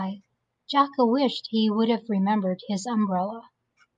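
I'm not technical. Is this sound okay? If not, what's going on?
Yes, no faults to report.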